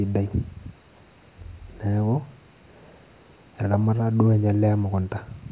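No technical faults can be heard anywhere in the recording.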